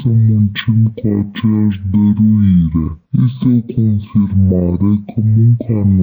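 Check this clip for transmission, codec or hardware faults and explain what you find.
There is one fault, and it runs through the whole clip. It is stereo read as mono. Left and right samples, stored alternately, were played back one after another as a single channel. Each stereo frame therefore lasts twice as long. The audio plays at 0.5× speed and sits 12 semitones, a full octave, too low.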